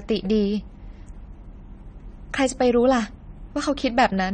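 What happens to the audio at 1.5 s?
At 1.5 s, the speech has the same dull, smeared quality that runs through the whole clip, with nothing at all above 9 kHz and a fizzy, warbling edge on sibilants. That's likely AAC compression: AAC-LC at a low bitrate, which fits something around 32 kbps, spends its few bits on what the hearing model ranks highest, so it drops the top band and coarsely quantises the rest. The damage is plainly audible here.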